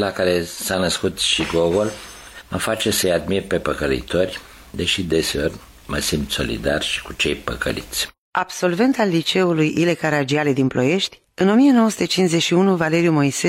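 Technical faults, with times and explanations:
No technical faults to report, so there are no times or explanations to give.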